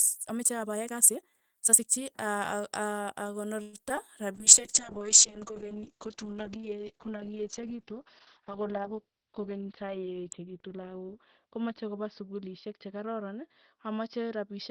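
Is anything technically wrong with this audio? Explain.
Yes. This speech clip has five distinct faults, all clustered around a single rough stretch of network conditions after a processed opening.

From 0.0 to 2.08 s there is a time-stretched section. The speech runs at about 1.51 times normal speed with its pitch unchanged, which points to software squeezing the passage to fit a length by discarding short pieces. It sounds rushed. Unlike a jitter buffer speed-up, it starts with the clip, is much stronger, and is not tied to any network disturbance.

From 3.62 to 3.75 s comes a call audio freeze. Packets were likely held up in transit, the jitter buffer ran dry, and the receiver extended the last sound for about 115 ms as a fading buzz or hiss. When the packets arrived, playback resumed where it had stopped, so nothing was lost. A gap was simply inserted, adding about 115 ms of delay. That sets it apart from packet loss, where real audio disappears.

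Short concealed packet loss follows at 3.89 to 3.92 s and again at 3.96 to 3.99 s. In each case about 20 ms of the call never reached the decoder. The receiver covered the hole by continuing the preceding sound briefly and then blending back, which is heard as a quick smear or wobble. Here, unlike the freeze, the original audio is gone rather than delayed.

From 4.36 s to the end there is a call bitrate drop. The encoder was pushed from 32 kbps down to 7 kbps and stayed at its lowest rate for about 5.1 s. Bandwidth falls from 20 kHz to 4 kHz, so the voice becomes muffled, and coarse coding makes it rough and watery. A plain low-pass filter would dull the sound without that grainy, warbling texture.

From 8.91 to 9.91 s, inside the low-bitrate stretch, a jitter buffer speed-up plays the speech at about 110% with the pitch held. The buffer had built up excess audio, and the receiver trimmed short pitch-period pieces repeatedly, cutting roughly a tenth of a second in total. 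The result sounds slightly hurried. Compared with the opening time-stretch, it is milder and briefer, as the buffer catches up.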